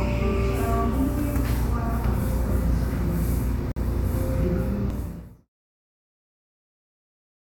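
At 3.72 s a gap at a join of encoded pieces cuts in: a gap of about 47 ms, ending at 3.76 s, with smeared edges. Two separately encoded segments were joined untrimmed, leaving encoder delay and final-frame padding, before the sound resumes where it stopped.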